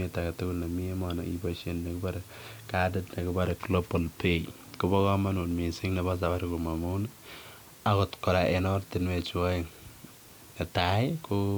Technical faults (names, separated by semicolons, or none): low bit depth with dither